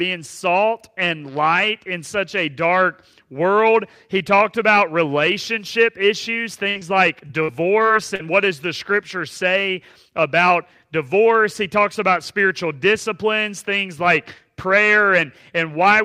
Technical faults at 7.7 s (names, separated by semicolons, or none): repeated packet loss (robotic sound)